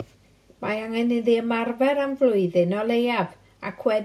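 Across the whole speech recording, there is no technical fault to hear. At no moment does the sound stray from how it ought to come across.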